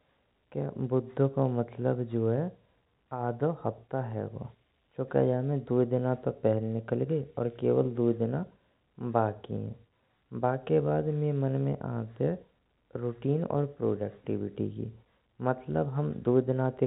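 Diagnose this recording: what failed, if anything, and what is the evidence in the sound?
Nothing failed in this recording, and the sound gives no evidence of a fault at any stage.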